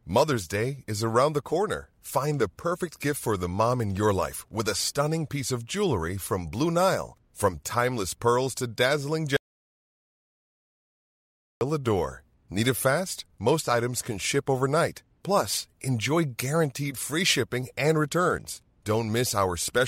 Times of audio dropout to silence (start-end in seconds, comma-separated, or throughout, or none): 9.37-11.61